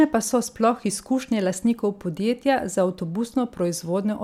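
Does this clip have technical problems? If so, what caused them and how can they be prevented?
No, there are no technical problems to report here.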